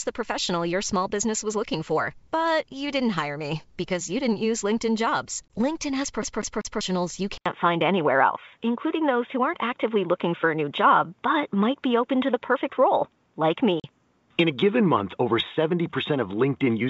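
At 5.48 s the speech drops into a hard-edged hole about 20 ms long, the size of a single lost packet, then comes back with a brief roughness before it settles. That is packet loss on an ADPCM call. The missing stretch was filled with silence, and because ADPCM sends only differences, the receiver's predictor and step size no longer matched the sender's. The first moments after the gap are decoded from that wrong starting point, which is what makes the returning speech slightly distorted.

From 6.22 to 6.81 s the audio stutters in a fast, even rhythm. A fragment about 195 ms long plays three times, with a tiny mute at each jump back. This is the sound of a CD stuck on one turn. A scratch knocks the laser back a track at the same point on each rotation, so the disc keeps returning to the same short slice.

At 7.38 s there is a silence of about 80 ms. After it the sound turns duller and boxier and stays that way to the end. 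Nothing above about 3.8 kHz comes through, the level shifts by roughly 5 dB, and a new, faint background noise sits about 50 dB below the speech. The likely cause is that the input switched to a poorer device, a narrower-band microphone or a headset's call profile, with its own tone and noise. Before the switch, the G.722 wideband path carries the speech well up the spectrum.

At 13.80 s the ADPCM dropout recurs, this time about 40 ms long, which fits two consecutive lost packets. The gap is longer and again has a hard edge. The speech resumes with a short stretch of distortion while the decoder's state catches up with the sender's.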